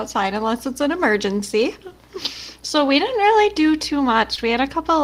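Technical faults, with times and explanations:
3.46 and 4.36 to 4.39, short concealed packet loss: about 10 ms and then 20 ms of speech arrived too late, and the receiver papered over each hole by extending the preceding sound, so you hear a brief smear or wobble rather than the dead gap of an unconcealed dropout.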